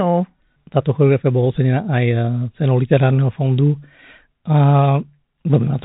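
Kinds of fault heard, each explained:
The speech sits within a telephone band that stops at about 3.8 kHz, consistent with G.711 telephone coding working as intended, and no fault can be heard.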